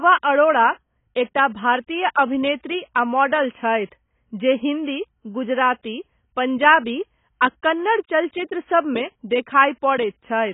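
Speech run throughout through what is likely heavy AAC compression at a very low rate, fitting AAC-LC near 16 kbps. Nothing survives above 3.8 kHz, so the audio sounds dull and muffled, with a smeared, warbling, fizzy texture on sibilants and held sounds.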